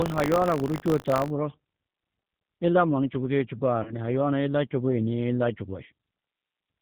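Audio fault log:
throughout: G.729 codec. The speech is band-limited below 4 kHz and sounds rough and synthetic from pulse-based excitation, consistent with 8 kbit/s G.729A coding.
0.00–1.32 s: buffer tearing. A 50 Hz robotic buzz where a small slice of each buffer repeats audio about 40 ms old, with hard joins at both edges.
3.83–3.94 s: VoIP packet loss concealed by the speech codec. About 30 ms is missing, likely a single lost packet, filled by a fading extrapolation of the last pitch and filter, with weak, distorted speech continuing afterwards.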